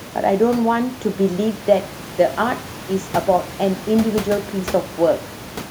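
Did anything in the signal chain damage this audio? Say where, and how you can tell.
No, nothing in the chain has harmed this speech; the only thing under it is the room's own background noise, sitting about 17 dB below the talking, and that was there in the air when it was recorded.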